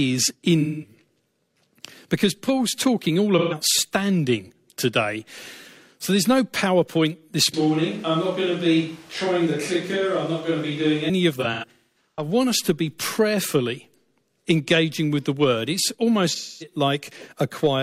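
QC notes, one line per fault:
0.61–0.93 s: AAC frame loss with concealment. About 0.32 s of sound turns smeared and noisy. The decoder is patching lost frames from the last good spectrum.
3.38–3.55 s: AAC frame loss with concealment, between "talking all" and "standing today". A brief phasey, blurred patch where missing frames were filled in from earlier spectrum.
7.54–11.09 s: switch to a distant microphone. The sound suddenly turns hollow and roomy, roughly 5 dB quieter, with thinner bass and audible room noise. This likely means a farther microphone replaced the close one.
11.35–12.28 s: AAC frame loss with concealment, just before "us to be prayerfully". Repeated gaps over about 0.77 s, the longest around 0.3 s, sound smeared.
16.29–16.75 s: AAC frame loss with concealment. About 0.26 s of lost audio is rebuilt from the previous spectrum, leaving a noisy, smeared stretch.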